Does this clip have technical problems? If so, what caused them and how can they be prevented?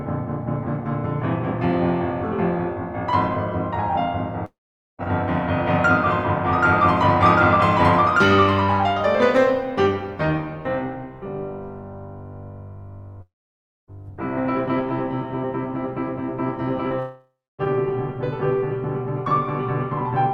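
Yes. A long network dropout is the likely cause: the audio stream stopped arriving for over half a second at 4.45 to 5.01 s, 13.22 to 13.90 s and 16.99 to 17.61 s. Each time the player stretched the last bit of music into a fading buzz, which then gave way to silence for about 0.46, 0.59 and 0.27 s. The music resumes further on, with that stretch missing. A more stable connection and a larger receive buffer would prevent this.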